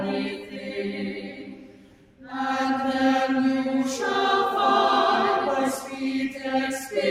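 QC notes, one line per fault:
Throughout: noise suppressor applied to music or sounds. A speech-tuned suppressor keeps mistaking sustained tones and ambience for noise, so the level swings by around 10 dB as it clamps and releases. The transients mostly get through while held material and decays pump and thin.
0.35–2.33 s, 5.8–6.0 s, 6.3–6.45 s: sound cut by the noise suppressor. In these three spans, steady or fading sound sinks by up to about 11 dB, 6 dB and 7 dB respectively, and its tails are cut short. This is a partial duck, not a dropout, and sudden onsets mostly punch through.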